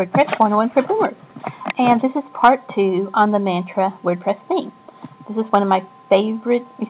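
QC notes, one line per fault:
throughout, clock drift between sender and receiver: the sending side's audio clock runs ahead of the receiver's by around 5 percent, so the jitter buffer keeps accumulating surplus audio. The receiver must discard material to keep up, leaving small, irregular timing stumbles across the whole clip, heard over the narrow G.711 band that stops at 4 kHz.
0.06 to 6.65 s, repeated timing corrections: to keep pace with a sender playing at 105 percent of its own rate, the receiver repeatedly trims short pieces out of the stream. Every edit removes audio and none adds it back, but they land at uneven intervals, so the flow has faint hiccups and a slightly unsteady tempo.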